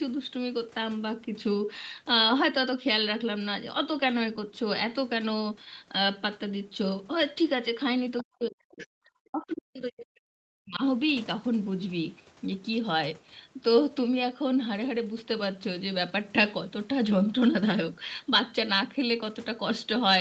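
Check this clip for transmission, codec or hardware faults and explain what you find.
Two echo-cancellation faults cluster between 8.18 and 10.82 s in this speech, both tied to the far end talking at the same time as the near end.

Other side's voice leaking through, 8.18–8.24 s and 8.78–8.86 s: the echo canceller likely left part of the loudspeaker signal in the microphone feed, so the far end's voice slipped back out. Each leak is a brief, faint scrap lasting well under a tenth of a second and sitting around 20 dB below the main talker. It sounds like a fragment of a second voice.

Speech suppressed in double talk, 8.24–10.82 s: with both parties speaking, the canceller likely couldn't tell the local talker from the returning echo and attenuated everything to be safe. Across roughly two seconds in total, the talker's level drops in patches, at its deepest by around 40 dB. The voice dips during that stretch. 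Throughout the clip, the audio is band-limited to 8 kHz, which fits a wideband Opus call.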